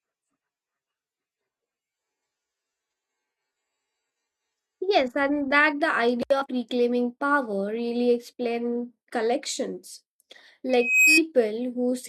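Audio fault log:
10.69–11.22 s, loudspeaker feedback squeal: the microphone is picking up its own loudspeaker, and at 2.5 kHz the loop gain passes one, so that tone feeds on itself. It swells over roughly a third of a second into a piercing whistle about 5 dB above the speech.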